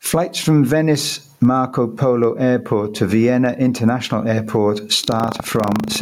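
Across the whole speech clip the level breathes: the gain is pulled down sharply under each louder syllable and recovers after it, a swing of roughly 15 dB. This is gain pumping, likely from input gain set far too high with a fast limiter or compressor clamping down on every peak. Loud and quiet passages sit unnaturally close together. Unlike a noise gate, the gain never cuts to silence; it rises and falls smoothly with the speech.

From 5.0 s to the end, a robotic buzz at 25 Hz rides on the speech. This is buffer tearing: the software writing the ring buffer and the hardware reading it have drifted until they cross inside every 40 ms period. A small slice of each period, well under a tenth, is stale audio from about a tenth of a second earlier, spliced in with hard joins on both sides. Unlike steady mains hum, the rattle appears only while there is signal and vanishes in silence.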